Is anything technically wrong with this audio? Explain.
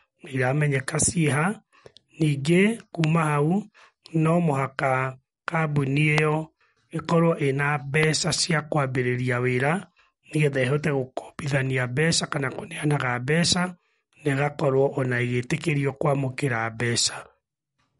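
Yes. Two kinds of fault are audible in this speech clip.

MP3 compression runs through the whole clip. The damage is plainly audible. Nothing sounds above 11.2 kHz, where the encoder has cut the treble. The level of damage fits a low bitrate, around 48 kbps. Short of bits, the encoder drops weak frequency lines, and they flicker on and off between frames. The result is a watery, swirling texture. The s sounds turn metallic, and attacks smear.

A loud pop occurs three times: from 3.04 to 3.06 s, from 6.18 to 6.20 s, and from 8.03 to 8.05 s. Each is a single sharp pop, and two of them are about 20 dB above the speech. The one at 6.18 s is stronger, at about 25 dB. The likely cause is a sudden voltage step or pulse, from a switch, static or a driver glitch. The speech continues underneath each one.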